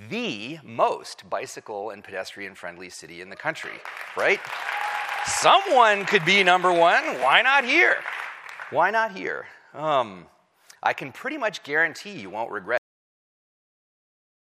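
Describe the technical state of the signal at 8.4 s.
At 8.4 s the signal is intact, with no dropout, distortion, glitch or other fault audible at that moment.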